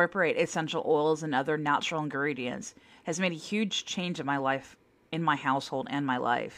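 Nothing technically wrong can be heard anywhere in this speech recording.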